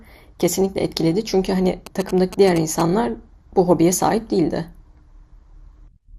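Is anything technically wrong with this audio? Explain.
Yes, there are two problems.

Throughout the speech, the top end is dull and flickers in and out, with a gurgling, grainy distortion. That points to MP2 compression, likely at a low rate near 80 kbps. Layer II starves its upper sub-bands of bits, switching some off and coarsely quantising the rest.

From 1.87 to 2.82 s there are GSM signalling bursts. A nearby 2G phone exchanging control traffic with its network sends short radio bursts, and the audio circuitry rectifies them. The result is a galloping run of brief 217 Hz buzzes, about 10 dB below the speech.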